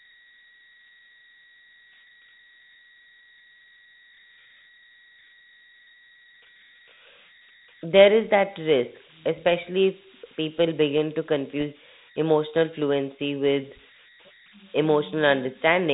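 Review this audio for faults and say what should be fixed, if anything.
Converter idle tones run through the whole clip: a whistle around 2 kHz sits in the pauses, and grainy noise rides under the quieter speech, with the error at about -26 dB relative to the signal. The converter is a delta-sigma design running without dither, so small inputs lock it into repeating bit patterns whose period sets the tone's pitch. To prevent this, add dither ahead of the delta-sigma modulator so it cannot settle into periodic states.

Bit errors on an ADPCM link appear at 11.60 to 11.62 s as a short pop and rough burst with a brief change in level. The damage is consistent with a couple of frames being hit, at an error rate on the order of 0.2 percent. A flipped bit in adaptive differential coding also corrupts the decoder's step size and predictor, so the disturbance continues for several milliseconds after the bad bit itself. 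The G.726 link carrying it runs at 32 kbit/s, and its band limit and light coding noise are audible alongside. To prevent this, protect the ADPCM stream with error detection and concealment, or improve the radio link margin.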